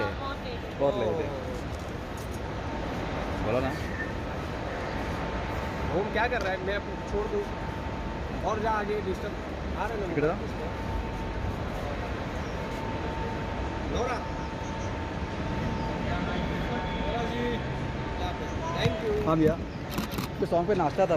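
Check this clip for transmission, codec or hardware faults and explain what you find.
No transmission, codec or hardware faults can be heard anywhere in the recording, which stays continuous throughout.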